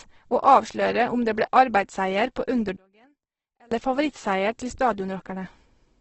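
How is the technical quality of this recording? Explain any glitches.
The quality's pretty rough: the whole clip has a heavily coded sound, and there's a short stretch where the speech nearly drops out.

Throughout, this sounds like Opus compression, likely run at a very low rate, roughly 12 kbps. Nothing reaches above about 8.1 kHz, so the speech is capped at wideband. The encoder is in its music (CELT) mode, so starved bands get filled from folded lower content or noise rather than left empty. That gives the voice a grainy, rough, noisy texture instead of a swirly one.

From 2.76 to 3.72 s, right after "det ble arbeidsseier på", the level falls by about 33 dB. That points to one channel inverted, likely somewhere in the stereo chain, with the two sides then summed to mono. The voice sits identically in both channels, so the flipped copy cancels it almost entirely, leaving only a faint residue of whatever differed between the sides until normal polarity returns.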